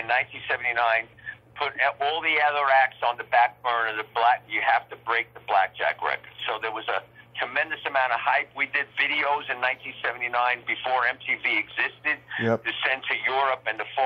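Nothing stood out as a technical fault on listening.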